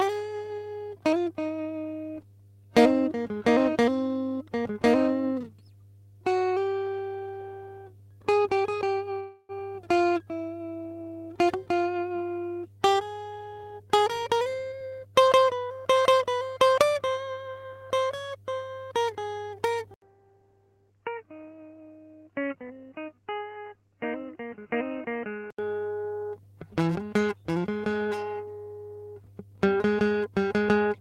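A steady mains hum at 50 Hz runs under the music for the whole clip, sitting roughly 25 dB below it. It points to a ground loop or a nearby transformer bleeding the power line into the signal path. It is heard as a constant low drone that does not follow the music, with a few low harmonics adding some buzz above the 50 Hz fundamental.

From 9.19 to 9.61 s there is a call audio freeze. The last moment of music is stretched into a fading buzz for about 297 ms, dropping to near silence for roughly 30 ms before the music resumes exactly where it left off. This is likely caused by packets stalling in transit and the jitter buffer running dry. Nothing is lost, but a pause of about 0.3 s has been inserted and the timing lurches at that point.

Between 13.38 and 15.39 s a jitter buffer speed-up pulls the music ahead at about 114% of normal speed with no change in pitch. The receiver is trimming the backlog by cutting many short slices, each a pitch period or so long, which removes roughly 0.3 s in total. 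The tempo audibly rushes over those two seconds and loses its steady pulse.

At 19.94 s the audio drops out for 80 ms, then returns through what sounds like a different microphone. This input switched to a poorer device lasts until 25.59 s, and a change of input device is the likely cause. In that span nothing comes through above 3 kHz, so the sound turns dull and boxy. It is also about 10 dB quieter and carries a faint new noise floor, roughly 50 dB down.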